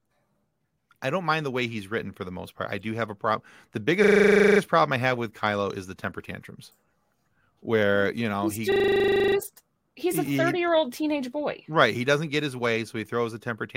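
It's a speech clip with a system hang loop in two places: 4.04 to 4.6 s, just before "problem I have with", and 8.72 to 9.36 s, just before "he's a". Each time the driver or machine stalls while the sound hardware keeps replaying the same 40 ms chunk of its ring buffer, so you get a steady 25 Hz buzz, 14 and then 16 repeats, with essentially no speech missing once it resumes.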